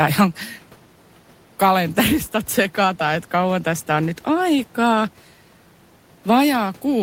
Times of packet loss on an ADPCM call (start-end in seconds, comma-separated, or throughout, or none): none